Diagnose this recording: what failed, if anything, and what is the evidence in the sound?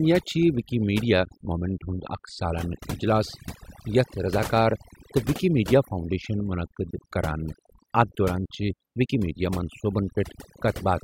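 Overdone noise removal in the processing stage, audible across the whole speech clip. Between phrases the background drops to near silence flecked with twinkling specks. The suppressor is set too aggressively, cutting individual frequency bands that sit near its noise estimate, and quieter parts of the voice vanish with them.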